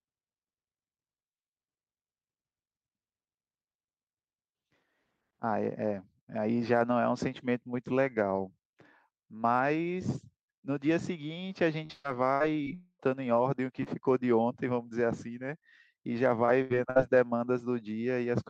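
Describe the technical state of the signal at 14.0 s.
A brief smear and wobble runs from 13.83 to 14.03 s: short concealed packet loss, where about 20 ms of missing speech was patched by extending the preceding sound.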